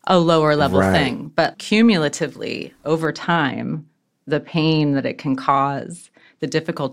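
From 3.05 s to 6.41 s the speech turns dull and muffled: de-emphasis applied wrongly. A treble cut meant to reverse pre-emphasis has either hit audio that never had that boost or been applied twice, so the response rolls off smoothly to about 11 dB down at 10 kHz.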